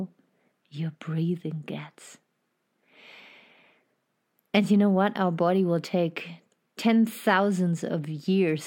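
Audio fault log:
No faults found in this clip.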